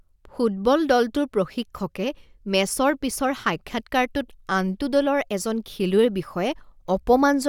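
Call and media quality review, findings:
No call or media quality findings for this recording.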